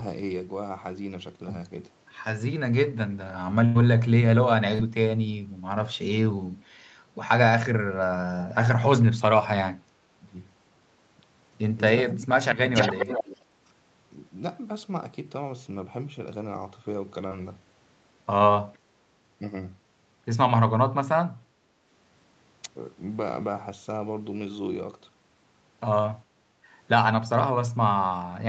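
At 3.65 to 3.77 s the sound stretches into a held, fading tone and then jumps ahead. This is a burst of packet loss: about 100 ms never arrived, and the receiver extended the last sound for roughly 94 ms.

At 4.75 s and again at 17.27 s there is a brief smear lasting about 40 ms each time. This is short concealed packet loss, where the gap was filled by continuing the preceding sound.

At 10.18 s, 12.08 s and 12.37 to 12.49 s the level dips, by roughly 10 dB in the first two cases and about 25 dB in the last. This is speech suppressed in double talk, likely caused by the echo canceller ducking the audio while both sides spoke.

From 12.74 to 13.37 s a delayed copy of the audio is heard trailing 416 ms behind, only about 5 dB quieter than the original. A faint trace of it, about 40 dB down, recurs at 18.73 s. This is echo leak, likely from a loudspeaker whose echo canceller let the sound through.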